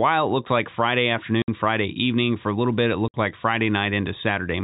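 It's a speech clip with two spots of packet loss filled with silence: 60 ms holes at 1.42–1.48 s and 3.08–3.14 s, right after "a little bit it". Each gap fits three 20 ms packets dropped, with hard edges, over normal-sounding telephone-band G.711 audio.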